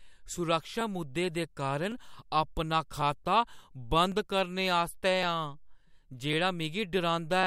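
From 0.81 s to 7.43 s the speech carries a regular click, about seven in all, one every 1.1 s. These are likely clock drift buffer slips: two clocks disagree by several hundred parts per million, so a few dozen samples are periodically dropped or repeated.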